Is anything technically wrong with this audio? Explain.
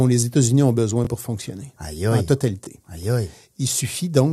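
Yes, there are two repeated buffers, at 1.05–1.07 s and 2.65–2.67 s. Both times, fresh audio arrived late, so the device replayed its last block of about 21 ms, which fits a 1024-sample buffer. Each repeat causes a brief stutter with a hard join and skips roughly 20 ms of speech.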